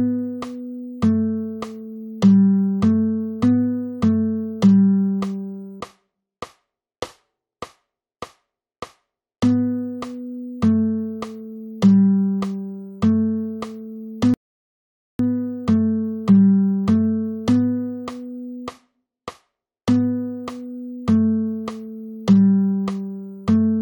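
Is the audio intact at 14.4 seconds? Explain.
No. At 14.4 seconds playback is inside a rebuffering stall, running from 14.34 to 15.19 s. The player exhausted its downloaded audio and went silent for 0.85 s until more arrived. Unlike a dropout, nothing is skipped: the sound resumes exactly where it stopped, just later.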